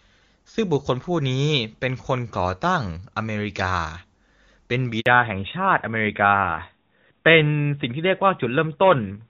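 At 5.0 s the speech cuts out for 60 ms, until 5.06 s. This is a handover gap. The call switched networks, and no speech frames arrived during the move. The sound fades out quickly and stays silent. Whatever was said then is lost.

From 5.06 s to the end, the call falls back to narrowband. Before this, the HD Voice link sounds clean, which fits AMR-WB at around 23.85 kbit/s. Afterwards, nothing remains above 4 kHz. This fits AMR-NB at 12.2 kbit/s. The speech turns duller and rougher.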